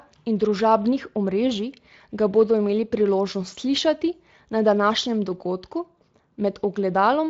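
No technical fault can be heard anywhere in this speech recording. It has passed through the Speex codec at what sounds like a fairly high quality setting, around 24 kbps, leaving only light coding texture and no content above about 7.6 kHz.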